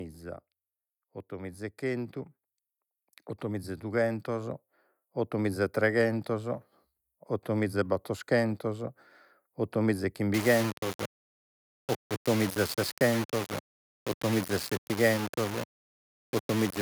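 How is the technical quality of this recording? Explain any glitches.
Two glitches reduce the quality of this speech recording.

From 3.41 to 9.07 s, automatic gain rising lifts the level by about 7 dB. The gain control judged the input too quiet and raised it gradually. Speech and background swell together over several seconds.

From 10.34 s to the end, the speech turns grainy and harsh. Quiet stretches sputter or drop out. The likely cause is low bit depth without dither. Rounding to so few levels fits 4-bit quantisation. The distortion sits only about 10 dB below the speech and follows it.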